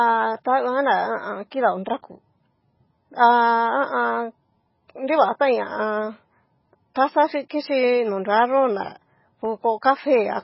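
MP3 compression runs through the whole speech clip, most likely from an encoder starved of bits, which fits a bitrate of around 16 kbps. With so few bits, weak frequency lines are zeroed and flicker between frames, giving heavy watery smearing, and nothing is left above 5.5 kHz.

Dropped samples at 0.35 s produce a single sharp click. A tiny fraction of a millisecond of the waveform is likely missing, so the signal jumps abruptly to a later value. The gap is far too short to lose any sound.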